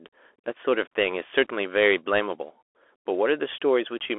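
From start to finish the speech runs through a Bluetooth CVSD headset codec, and the damage is plainly audible. It's that narrow phone-line band, roughly 300 Hz to 3.4 kHz, with nothing above 3.8 kHz. CVSD codes each sample as a single up-or-down bit with an adapting step, which fits a 64 kbps link. Fast, loud high content outruns that step, so the sibilants come out scratchy and a grainy hiss sits under everything.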